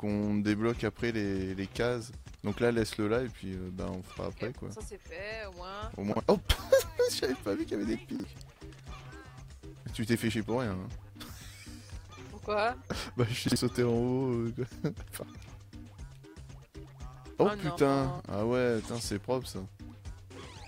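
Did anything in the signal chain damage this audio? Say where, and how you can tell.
Yes. There are three spots where chunks out of order scramble the flow: 6.12 to 6.2 s, 8.16 to 8.24 s, and 13.48 to 13.56 s. Each one is a brief jumbled blip with hard joins. It's 40 ms blocks swapping places, with one block landing a single chunk late, so nothing is missing, just shuffled. That points to the driver or buffer stage, or to storage writing blocks out of sequence, which fits a 40 ms buffer.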